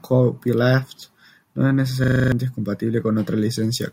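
From 2.04 to 2.32 s, a system hang loop repeats one 40 ms slice of the speech seven times, a 25 Hz machine-gun stutter, unlike a dropout's silence.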